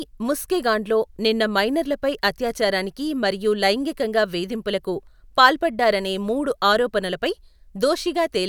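Nothing stood out as a technical problem on listening to this speech recording.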